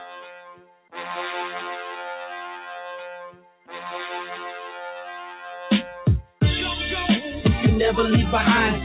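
A speech-oriented noise suppressor is running on this music throughout, treating sustained tones and reverb tails as noise. Its gain swings by around 15 dB, so held material pumps and thins while attacks pass largely intact, all within a band that stops at 4 kHz.

The sound is cut by the noise suppressor at 0.0 to 0.95 s and 3.15 to 3.73 s, each sinking about 14 dB, and at 6.22 to 6.41 s by about 13 dB. In these passages the sound drops away in level.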